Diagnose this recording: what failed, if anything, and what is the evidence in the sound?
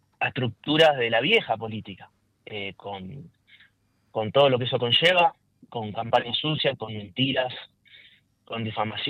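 Nothing stood out on listening that would point to a failure at any stage of the chain.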